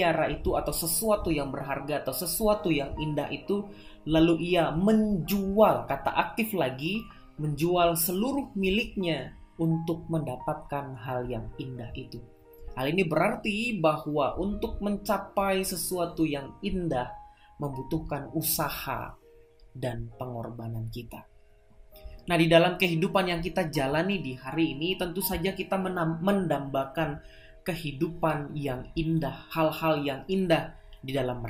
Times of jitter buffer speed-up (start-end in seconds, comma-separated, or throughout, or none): none